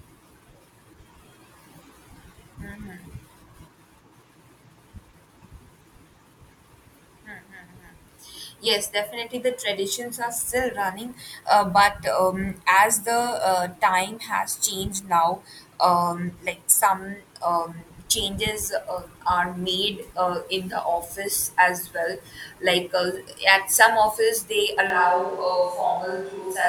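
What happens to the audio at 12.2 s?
Nothing goes wrong at 12.2 s; the speech continues intact through that moment, with no break, glitch or distortion.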